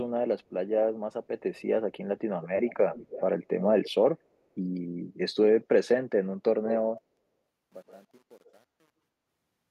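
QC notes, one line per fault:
2.42–2.49, 2.65–3.24, 3.84–3.91, 6.63–6.71, 7.87–7.97, 8.44–8.52 s: echo leak. A delayed copy of the speech trails behind it, most likely because a speakerphone's echo canceller let through part of what its microphone picked up. In the first three events the copy lags by 287 ms at about 15 to 20 dB below the speech. In the last three it lags by 127 ms and ranges from about 10 dB down at 6.63 s to about 35 dB down by 8.44 s. The constant lag sets it apart from room reverberation, which decays smoothly rather than repeating as a distinct copy.
6.98–9.71 s: truncation distortion on a fade. The fade-out is smooth in shape, but its quiet end turns gritty, worst from 7.47 s to the end. The coarseness suggests a gain stage holding only about 9 bits with no dither, so low-level waveforms collapse into a few square steps. This differs from codec artefacts because the grit grows as the level drops and is tied to the fade itself.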